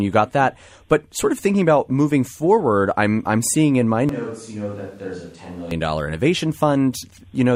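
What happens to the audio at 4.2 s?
From 4.09 to 5.71 s there is a switch to a distant microphone, likely because the close one dropped out. The speech turns suddenly roomy, hollow and thinner, roughly 10 dB quieter.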